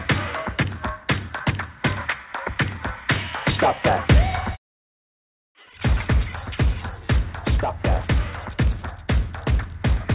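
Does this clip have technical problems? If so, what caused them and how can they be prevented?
No, there are no technical problems to fix here. The audio has the narrowband character of a call path, with nothing above 4 kHz, which fits G.711 mu-law telephone coding at 64 kbps.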